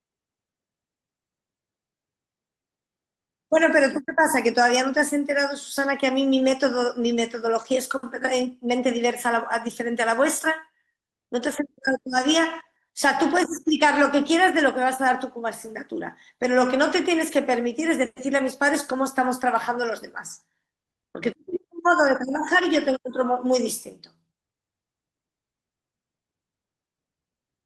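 At 4.93 s and 16.89 s, lost packets rebuilt from error correction play low-bitrate copies: 40 ms, then 60 ms, of rougher, noisier speech, without a gap.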